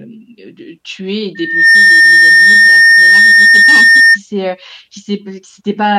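Loudspeaker feedback squeal runs from 1.35 to 4.19 s, starting after "de de tuer et" and ending before "s'est heu". The microphone is re-amplifying its own loudspeaker, and at 1.8 kHz the loop gain passes unity. That tone swells within roughly a third of a second into a piercing squeal about 15 dB above the speech.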